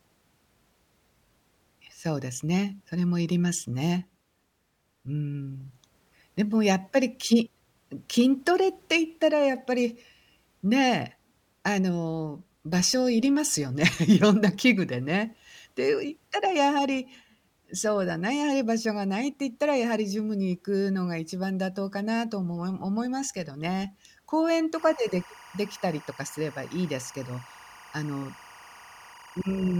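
At 24.76 s a timecode bleed creeps in under the speech and runs right to the end of the clip. Linear timecode from a nearby track or cable has leaked into the audio path. Its square wave flips between two pitches at roughly 1 kHz and 2 kHz, clocking along at 23.976 frames per second. It sits well down, maybe 25 dB under the speech, but you still get that steady chirpy warble behind everything.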